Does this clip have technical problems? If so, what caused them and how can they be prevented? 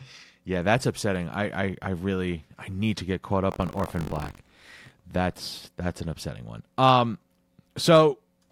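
Yes. Buffer tearing runs from 3.50 to 4.91 s: a robotic rattle near 47 Hz, which fits a 1024-sample buffer. Writer and hardware reader have slipped, so about a tenth of each period replays speech roughly 70 ms old, hard-joined on both sides. Keep the write pointer locked a safe margin ahead of the read position.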